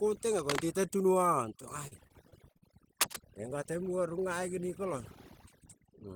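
Spoken audio with a background that falls to near silence sprinkled with twinkling specks. This is overdone noise removal: the reduction was set so hard that any frequency band close to the estimated noise floor is pulled down or shut off, and the softer parts of the speech are cut along with it. From 0.39 to 0.62 s a burst of ragged scratching sits a little below the speech level, and from 3.01 to 3.16 s a shorter one is about as loud as the speech. Both fit cable scratch noise, most likely a worn cable, connector or control being moved so that its contact resistance jumps around rapidly. Between 1.87 and 2.64 s the speech turns choppy, with repeated short dropouts up to about 43 ms long. This is repeated packet loss: each missing piece is patched by stretching the previous sound, and the concealment covers roughly a fifth of that stretch.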